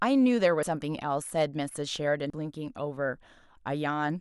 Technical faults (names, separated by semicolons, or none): compressed frames skipped